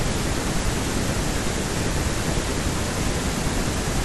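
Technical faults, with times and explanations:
Throughout, doubled audio track: the speech plays twice, with a second copy trailing roughly 0.7 s behind at about the same level, full-band and dry with no room tail, so it sounds like a flat echo. Likely a slower second capture path or an edit that stacked two copies.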